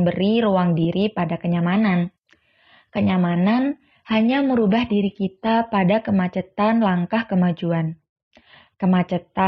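At 1.59 s, after "ruang diri pada", the adaptive stream switches to a lower bitrate. Codec artefacts grow. There is no gap. The sound fits a drop from AAC at 96 kbit/s to HE-AAC at 16 kbit/s. Quality returns abruptly at 5.59 s, before "pada kemacetan langkah kemajuan".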